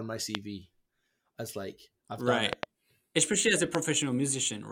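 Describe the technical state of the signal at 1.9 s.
The speech signal is intact at 1.9 s, with no audible fault at that moment.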